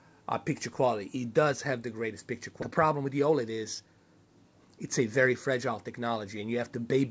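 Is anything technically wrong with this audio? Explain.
Yes, there are two faults. At 2.62 to 2.64 s there is a skip ahead: a stretch of about 0.4 s was dropped in transit or discarded from an overfull jitter buffer, so playback jumps forward with no gap and the two sides are spliced almost directly. From 2.71 to 3.87 s there is a jitter buffer speed-up: the receiver trimmed short pitch-period pieces, about a tenth of a second in total, to reduce the delay, so the audio runs at 108% speed at unchanged pitch and sounds hurried. Throughout, the G.722 call path limits the audio to 8 kHz.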